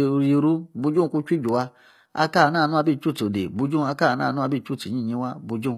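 Right through the speech, the top end sounds bright but synthetic, with gritty, lispy s sounds, likely HE-AAC compression rebuilding treble from copied lower bands, fitting roughly 24 kbps.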